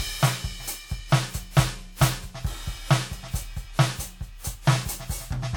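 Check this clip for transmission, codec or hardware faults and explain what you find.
The music has two faults: a smeared, hollow coding character throughout and two brief skips.

Throughout, the sound is swirly and hollow, with blurred attacks. This is likely generation loss from about four passes through WMA at 96 kbit/s, with quantisation noise compounding on each re-encode.

At 1.57 s and 4.85 s there are skips where the music jumps forward a few milliseconds without any silence. This is likely a dropped buffer (overrun), where samples were overwritten before being read.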